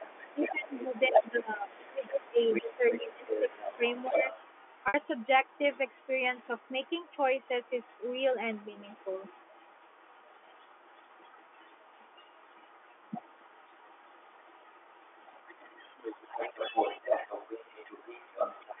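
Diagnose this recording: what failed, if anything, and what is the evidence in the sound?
Call processing: a second voice runs beneath the speech from 0 to 1.31 s at about 10 dB down, then 1.69 to 8.21 s and 8.54 to 18.8 s at about 15 dB down. This is other-side voice leaking through, likely from incomplete echo cancellation.

Call processing: from 0.34 to 4.22 s the talker dips by up to about 15 dB for roughly three seconds while the leaked voice is present. This points to speech suppressed in double talk, likely the canceller turning both sides down, unlike a steady level fault.

Network: at 4.88 s a 60 ms gap is bridged by a repeat of the last pitch period that fades out over about 50 ms before the speech returns with a short cross-fade. That fits packet loss with pitch repetition over three 20 ms packets.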